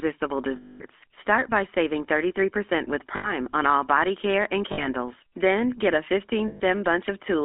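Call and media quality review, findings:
GSM full-rate codec, whole clip: buzzy, gravelly roughness on the speech, plainly audible throughout. The band sits at about 250 Hz to 3.6 kHz, with nothing up top. Probable component: the old full-rate coder, and the grain fits 13 kbps GSM. Mechanism: a vocal-tract model driven by a sparse, evenly spaced pulse train, so the fine excitation detail gets dropped and the buzz is what's left.

Lost GSM frames at 0.56 s (240 ms), 3.16 s (80 ms), 4.72 s (60 ms) and 6.48 s (120 ms): sound freezes into a rough, metallic ring, then picks back up. Probable component: decoder frame concealment. Mechanism: bad frames are swapped for the last good frame's settings and replayed. The 0.56 s one is the longest, a run of roughly a dozen frames.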